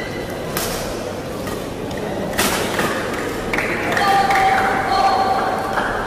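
Harsh, fuzzy distortion breaks into the audio three times: briefly at 0.57 to 0.64 s, more heavily from 2.39 to 2.86 s, and for a long stretch from 3.54 to 5.95 s. This is hard clipping. The signal is overdriving a stage by about 10 dB, 16 dB and 8 dB respectively, so the peaks are sheared flat. Those flat tops add high harmonics, which is why the middle burst sounds roughest.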